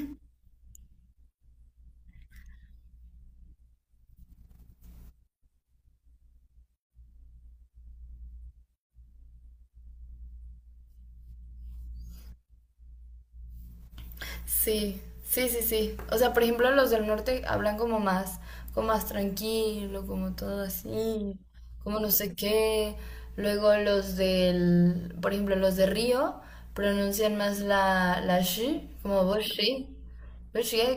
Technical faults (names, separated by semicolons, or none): stream segment repeated